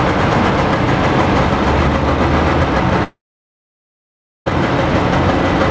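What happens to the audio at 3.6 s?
A long network dropout runs from 3.04 s to 4.48 s, so at 3.6 s the sound is simply gone. For about 1.4 s no audio reaches the listener. The receiver briefly extends the last sound as a fading buzz for roughly a tenth of a second, then leaves near-silence for about 1.3 s. The sound resumes at 4.48 s with that stretch missing, most likely because packets stopped arriving on the network link.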